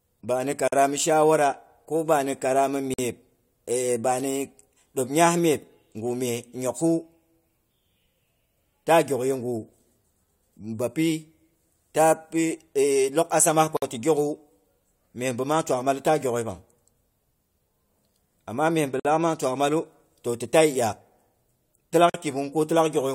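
Separately encoded speech pieces were joined without trimming encoder delay and padding, leaving a gap at a join of encoded pieces: silences of 46 to 54 ms at 0.68, 2.94, 13.77, 19.00 and 22.10 s.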